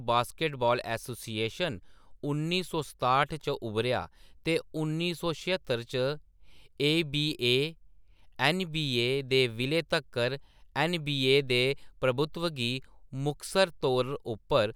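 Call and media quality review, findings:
No faults found in recording.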